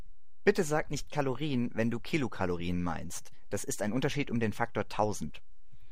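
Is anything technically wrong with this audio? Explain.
Yes. A DC offset runs through the whole speech clip from start to finish. The entire waveform sits shifted off the zero line by a constant amount, about -36 dBFS. Because it is a fixed shift rather than a vibration, the ear doesn't register it. It does eat a little headroom, though. On a waveform view the trace rides visibly above or below centre, and a spectrogram shows a steady band of energy pinned at the very bottom, near 0 Hz.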